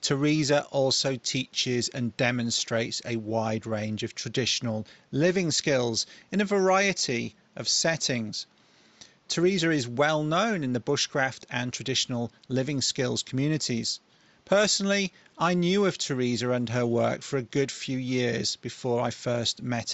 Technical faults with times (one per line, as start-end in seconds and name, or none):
none